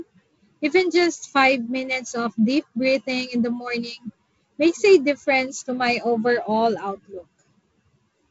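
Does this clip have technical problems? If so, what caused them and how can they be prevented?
No, nothing in this speech clip needs fixing.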